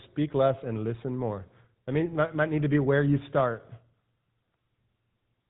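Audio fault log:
throughout GSM full-rate codec: plainly audible buzzy, gravelly roughness from pulse-driven vocal-tract modelling, fitting a 13 kbps rate; spectrogram shows nothing above 3.9 kHz.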